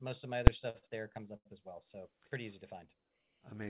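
At 0.47 s there's a single sharp bang where a calculation blew up into invalid numbers at full scale, pinning about 5 ms of output, which fits a 256-sample block.

Then come three short stalls from a late packet. The jitter buffer ran dry and the sound got held with a faint buzz at 0.70 to 0.76 s and 0.78 to 0.85 s, just before "there comes". The third, at 1.37 to 1.47 s, runs about 86 ms before "as well". The G.711 call path tops out at 4 kHz.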